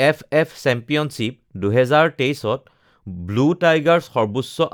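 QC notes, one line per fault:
Nothing stood out on listening to this speech clip.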